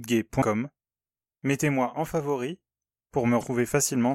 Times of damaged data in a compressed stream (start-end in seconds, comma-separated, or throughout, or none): 3.38-3.43